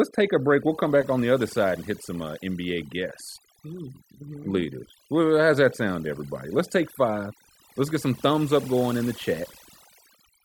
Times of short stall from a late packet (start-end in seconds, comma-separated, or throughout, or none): none